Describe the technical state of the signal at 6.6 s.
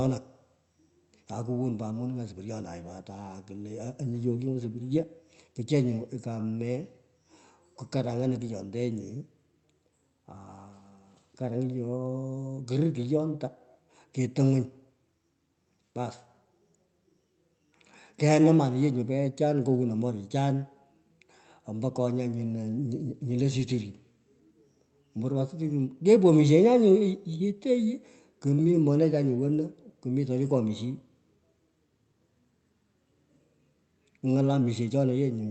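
At 6.6 s the speech comes through intact, with nothing beyond the ordinary character of the call path it travelled over.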